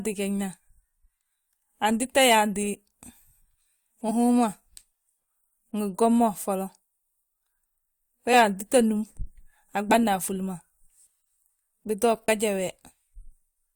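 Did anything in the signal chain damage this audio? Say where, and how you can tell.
Yes. Compressed frames are skipped at 2.73–2.76, 4.08–4.12, 8.30–8.34, 9.90–9.97 and 12.25–12.29 s. This happens at the codec decode stage: whole frames never reach the output, either missing from the file or rejected by the decoder as damaged. The speech jumps ahead by roughly 20 ms at three points, about 50 ms at 9.9 s, and around 100 ms at 4.1 s.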